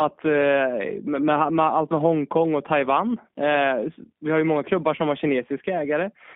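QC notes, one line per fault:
Throughout, G.729 codec: the speech is limited to roughly 150 Hz to 3.6 kHz, with nothing above that, and has a plainly audible rough, slightly synthetic edge. The decoder rebuilds each 10 ms frame from a vocal tract filter, a pitch predictor and a handful of pulses instead of the real waveform, so fine detail is replaced by a sparse approximation. The sound points to an 8 kbit/s G.729A-type coder.
4.96 to 4.99 s, VoIP packet loss concealed by the speech codec: about 20 ms of audio is missing, which fits a single lost packet. The decoder covers the gap by repeating its last pitch and filter at falling gain, so the speech briefly turns into a buzzy or noisy fill. Each frame builds on the previous one, so the speech stays weak or smeared for a short stretch after real audio resumes.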